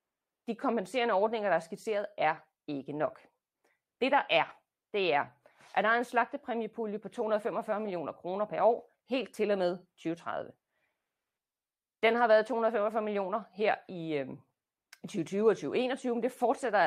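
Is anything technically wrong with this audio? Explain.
No, no technical faults here.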